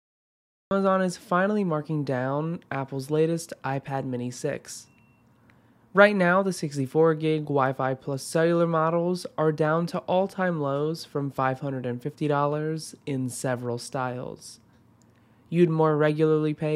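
The first 0.71 s is digital silence, and at 0.71 s the sound bursts in already underway, with no natural attack or fade-in. This is a cut-off start: capture or streaming began late, so the opening of the sound was never recorded.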